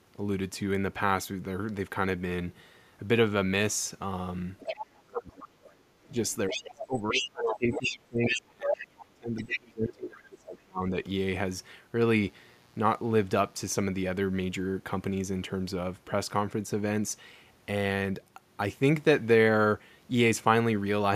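At 4.59 to 4.86 s, again from 6.09 to 8.87 s and briefly at 9.42 to 9.59 s, the other side's voice leaks through, a second talker running some 5 to 10 dB below the main speech, likely left behind by an incomplete echo canceller.

From 4.85 to 5.65 s and 6.1 to 10.94 s, the speech is suppressed in double talk. The main voice sinks by up to about 30 dB, likely while the far side plays over the loudspeaker.

Between 12.2 and 13.8 s a raspy 60 Hz mains buzz sits about 35 dB below the signal. Its sharp upper harmonics distinguish it from a smooth hum.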